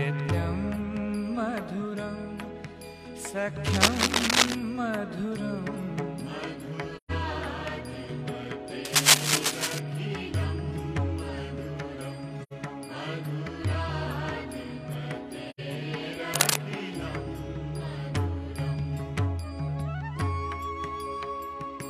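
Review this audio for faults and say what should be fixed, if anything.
Scratchy, rustling noise bursts sit over the sound from 3.67 to 4.56 s, 8.85 to 9.79 s and 16.34 to 16.58 s, the middle one well above the signal. This is cable scratch noise, likely a worn lead or connector being moved. Swap or reseat that cable and keep it still.

There are short soft-edged holes at 6.96 to 7.11 s, 12.42 to 12.53 s and 15.50 to 15.60 s. The sound fades out and back in. This is AAC frame loss with muting: about 128 ms and 85 ms of decoded audio zeroed, which fits two to three dropped frames each time. Use a steadier transport or add error concealment.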